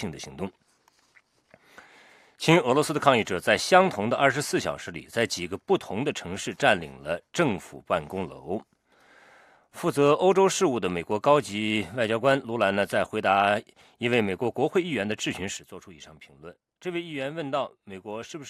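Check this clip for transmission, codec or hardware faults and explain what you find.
There's one fault, and it sits right at the end. At 15.57 s there's a sudden gain jump: the level drops by about 9 dB in a single step and stays down until the clip finishes at 18.49 s. The background noise falls along with the sound, so it's a change in digital gain rather than anything in the source. The likely cause is a gain setting or bit shift applied instantly, with no ramp to smooth the transition.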